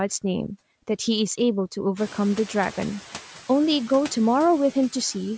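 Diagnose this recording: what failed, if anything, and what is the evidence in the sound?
Call processing failed briefly. The noise suppressor is catching up: at roughly 2 s the room noise jumps by about 16 dB, and from 1.96 to 2.19 s it comes through with less reduction before sinking as the suppressor's noise estimate adapts over about 230 ms, trimming it by about 4 dB. Unlike gate chatter or compressor pumping, this is a single smooth settle following the noise step rather than the speech level, leaving the noise about 20 dB below the speech.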